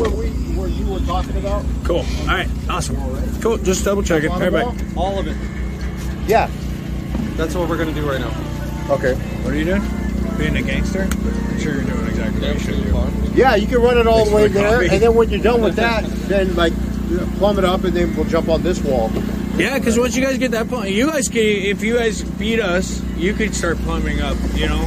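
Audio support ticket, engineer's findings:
No fault found on full listen; nothing to escalate from the audio path, closing the ticket.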